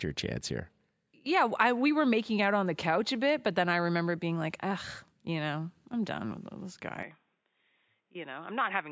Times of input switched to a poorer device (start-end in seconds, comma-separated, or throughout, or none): 7.03-8.92